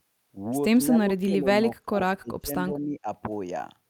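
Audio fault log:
0.91 to 1.47 s, 1.80 to 1.97 s, 2.20 to 2.51 s, 2.74 to 3.07 s: speech suppressed in double talk. The speech level drops in four separate bursts, each holding for a few tenths of a second. The second and third dips are deepest, falling by roughly 30 to 35 dB and nearly cutting out. The first and last dip by only 10 to 15 dB. The likely cause is an echo canceller treating overlapping far-end speech as echo and attenuating the near-end talker along with it.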